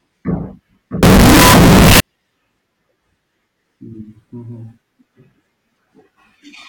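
A decoding stage most likely took 32-bit float samples and read them as 32-bit integers between 1.03 and 2.00 s of this speech recording, a float read as integer fault. The sign and exponent bits then dictate each sample's value, so the waveform flattens into a near-square shape at an almost fixed, high level. The passage turns very loud and harsh, with background noise raised to the level of the speech, though the pitch contour still comes through.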